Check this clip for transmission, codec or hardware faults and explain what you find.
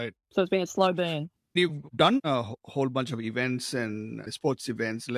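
No faults can be heard.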